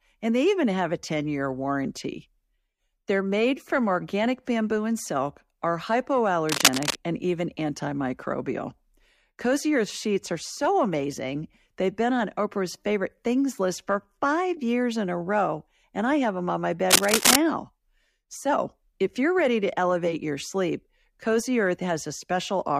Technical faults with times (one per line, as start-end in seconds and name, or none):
6.49-7.01 cable scratch noise
16.90-17.36 cable scratch noise